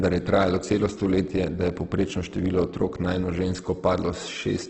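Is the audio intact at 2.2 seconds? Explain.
No, at 2.2 seconds the speech carries the same Opus compression damage that runs through the whole clip. It sounds rough and grainy, with nothing above 8.1 kHz. That likely comes from heavy CELT-mode coding at a very low bitrate, around 12 kbps, where starved bands get filled with noise.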